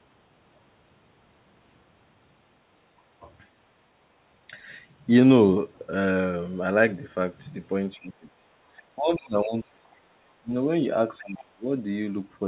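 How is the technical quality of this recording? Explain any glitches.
The recording has two recurring glitches, heard through a call path whose telephone-style band stops at 4 kHz.

Speech suppressed in double talk, from 7.95 to 8.40 s, 8.96 to 10.51 s and 11.19 to 11.65 s: the speech sinks by roughly 25 to 30 dB, likely because the echo canceller turned everything down when both sides talked at once. Unlike packet loss, the dips track the overlap rather than striking at random.

The other side's voice leaking through, at 9.16 to 9.21 s, 9.84 to 9.93 s and 11.18 to 11.44 s: brief scraps of a second voice slip in, likely loudspeaker echo that the canceller did not fully remove. The first is fairly audible, the second barely there. This is a different voice, not a repeat of the talker as in ordinary echo.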